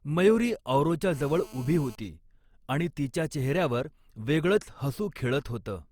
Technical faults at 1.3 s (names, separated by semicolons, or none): generation loss; GSM phone buzz